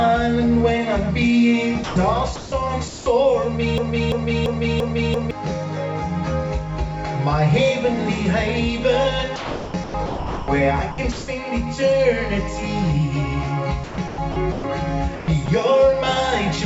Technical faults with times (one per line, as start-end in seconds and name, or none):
1.84-1.96 sound dropped by the voice detector
2.36-2.52 sound dropped by the voice detector
2.88-3.06 sound dropped by the voice detector
3.78-5.31 broken-record loop
9.36-10.48 sound chopped by the voice detector
10.92-11.28 sound chopped by the voice detector
13.84-14.64 sound chopped by the voice detector
15.16-15.48 sound chopped by the voice detector